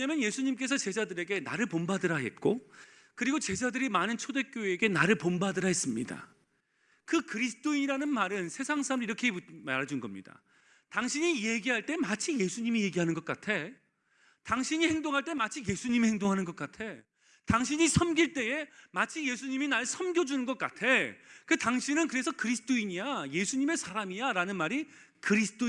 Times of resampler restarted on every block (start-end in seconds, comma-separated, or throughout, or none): 5.44-9.74